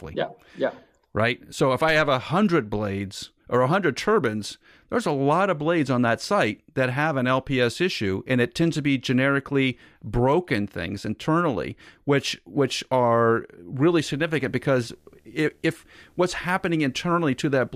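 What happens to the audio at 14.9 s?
At 14.9 s the speech carries video or display buzz, running from 13.88 s to the end of the clip. A screen or video cable couples into the audio path, adding a faint 75 Hz field-rate buzz with hash above it, roughly 40 dB below the speech.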